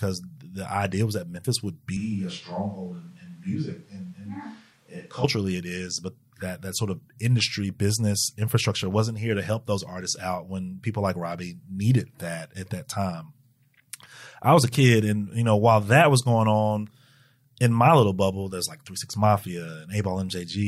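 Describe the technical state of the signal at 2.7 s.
At 2.7 s the speech sits inside a switch to a distant microphone, running from 1.97 to 5.24 s, just before "it is but that". It abruptly turns roomy and thin, about 5 dB quieter, with background noise rising to roughly 35 dB below the speech. The likely cause is the close microphone dropping out in favour of one further away. Unlike added reverb, it changes suddenly at both edges and brings lost bass and extra noise along with the room sound.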